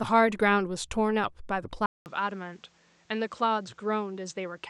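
At 1.86 s the input likely switched to a poorer device: after a 0.2 s silence, the speech comes back about 5 dB quieter, dull above 8.6 kHz, with new background noise.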